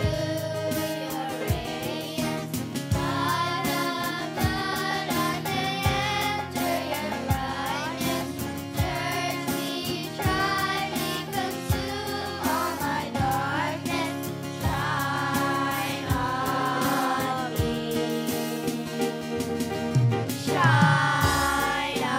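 No technical fault can be heard anywhere in the audio. Nothing breaks, drops out or changes unexpectedly at any point.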